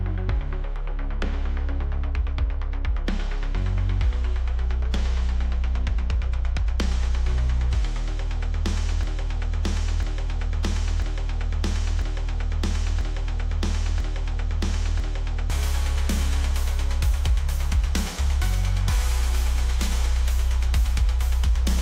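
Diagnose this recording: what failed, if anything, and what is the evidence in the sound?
A broken-record loop runs from 9.03 to 15.5 s. A 0.99 s fragment repeats exactly, seven times back to back. The likely stage is the player or stream buffer, which stalled and kept resending its last block. The audio due in that span is lost.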